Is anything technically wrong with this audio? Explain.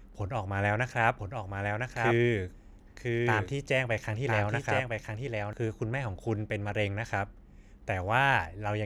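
Yes. From 1.19 s to 5.53 s there is a doubled audio track: a second copy of the speech runs about a second behind, a few decibels quieter, clean and full-band, starting and stopping abruptly. It likely comes from a slower duplicate capture path.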